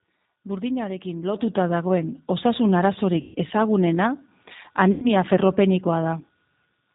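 G.729 codec damage runs through the whole speech recording and is plainly audible: everything above 4 kHz is missing, and the voice is rebuilt from a vocal tract filter, pitch predictor and sparse pulses, so it sounds rough and slightly synthetic, as an 8 kbit/s G.729A stream would. VoIP packet loss concealed by the speech codec occurs at 3.21–3.38 s and 4.92–5.11 s, where about 140 ms and 100 ms of audio went missing (seven and five 20 ms packets). The decoder stretches its last pitch and filter into a fading buzzy tone or coloured noise, and the voice stays weak briefly after each gap.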